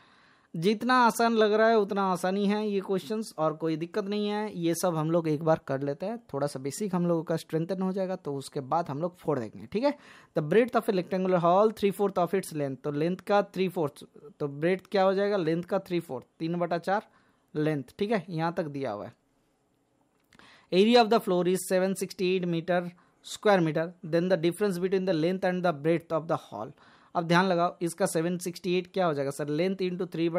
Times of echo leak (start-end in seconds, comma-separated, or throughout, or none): none